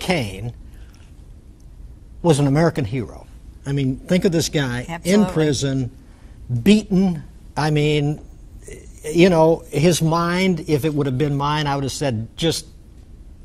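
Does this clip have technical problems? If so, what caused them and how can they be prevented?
No, there are no technical problems to report here.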